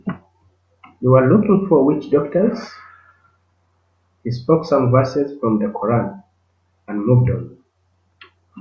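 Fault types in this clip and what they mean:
No faults are audible in this speech recording.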